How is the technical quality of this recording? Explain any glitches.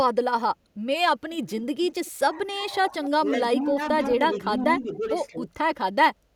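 The recording has two call-processing problems, both concentrated in the middle of the clip.

An echo leak appears from 1.91 to 2.11 s: a faint, delayed copy of the speech trails it by 194 ms, around 25 dB below the direct signal, most likely because a far-end echo canceller let part of its loudspeaker pickup through. On a waveform it shows as a small ghost of the preceding envelope; on a spectrogram, a weak duplicate of the harmonic pattern shifted right by about 0.2 s.

Speech suppressed in double talk follows at 2.45, 3.09, 3.61, 4.4, 4.78 and 5.3 s. Each time the speech briefly sinks, by about 5 to 15 dB, for roughly a tenth to a fifth of a second, sounding like the level being pulled down in chunks. The likely cause is an echo canceller that could not tell this talker from simultaneous loudspeaker sound and attenuated both. A waveform shows notched dips in the envelope; a spectrogram shows short, paler vertical bands.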